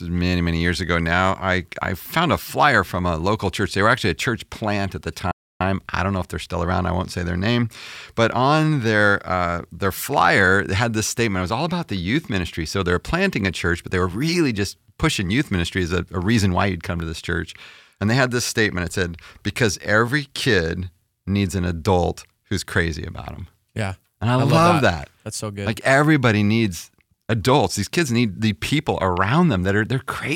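At 5.31 s, just after "church plant at the", the speech cuts to silence for about 290 ms and resumes at 5.61 s with "I don't know if". This playback stall is likely the player running short of data or its output thread being blocked.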